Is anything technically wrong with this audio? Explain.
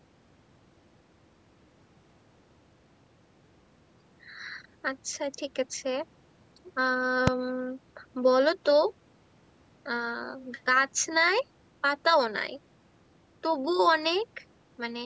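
Yes. At 7.27 s the speech is broken by a single sharp bang. This is invalid numbers at full scale: a calculation in the processing chain produced infinite or undefined values, and these were forced to the maximum sample value for one short block of about 2.7 ms, which fits a 128-sample block. A block that brief gives no silence between its edges and is heard as one loud click. On a waveform it is a thin slab pinned at one extreme value, far beyond the speech peaks. On a spectrogram it is a bright vertical line spanning every frequency. The call microphone processing it passed through is also audible, as reduced low bass and nothing above 8 kHz.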